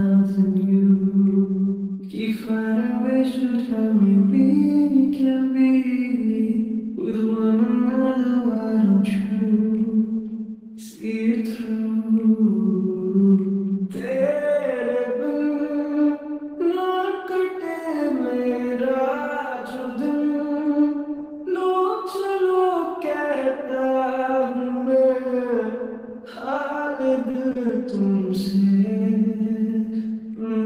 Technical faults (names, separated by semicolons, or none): short concealed packet loss; repeated packet loss (robotic sound)